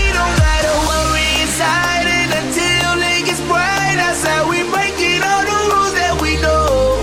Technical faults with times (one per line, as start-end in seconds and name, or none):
1.24-2.39 GSM phone buzz